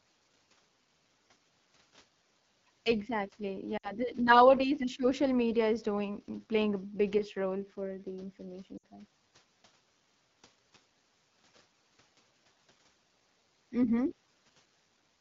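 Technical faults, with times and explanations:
Throughout: AMR wideband (HD Voice) codec at 8.85 kbit/s, one of its lowest rates. The low rate starves the speech model, so speech sounds plainly rough and raspy.
3.77 to 3.93 s and 8.77 to 8.84 s: lost AMR speech frames, about 60 ms each. The decoder reused stale pitch and tract settings, smearing speech briefly before fading, then recovering roughly.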